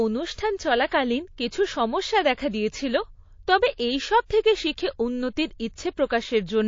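Throughout the speech, weak detail flickers in and out, giving a watery, swirly sound with smeared attacks. This is likely MP3 compression at a very low bitrate, consistent with about 32 kbps.

Pre-echo comes from the encoder keeping long transform blocks, about 72 ms, at sharp attacks instead of switching to short ones. Quantisation noise spreads into the quiet moment before each onset. A brief hiss, about 13 to 19 dB above the surrounding level and lasting 27 to 45 ms, precedes attacks at 0.35 s, at 0.89 s before "কিছু সমস্যা দেখা দিয়েছিল", at 4.26 s between "দেখা দিয়েছিল তবে এইসব" and "থেকে শিখে উন্নতির", and at 6.08 s after "এইসব থেকে শিখে উন্নতির".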